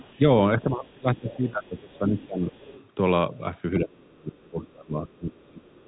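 Other side's voice leaking through, at 0.0–0.2 s, 1.28–1.78 s, 1.94–1.98 s, 2.17–2.26 s, 2.53–2.88 s and 5.11–5.15 s: brief scraps of a second voice sit about 20 to 35 dB below the talker, the strongest at 1.28–1.78 s. This is likely loudspeaker echo the canceller failed to remove from the microphone.

Speech suppressed in double talk, from 0.61 to 2.58 s and from 3.79 s to the end: the talker's voice dips and breaks up in pieces while the other side plays on the loudspeaker. It drops by roughly 20 dB in the first stretch and about 30 dB in the second. The likely cause is an echo canceller that could not separate talker from echo, so it turned both down.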